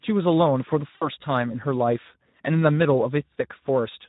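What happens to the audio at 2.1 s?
At 2.1 s the speech sounds hoarse and noisy, as it does throughout, from the Speex codec starving the excitation of bits, which fits a rate around 11 kbps.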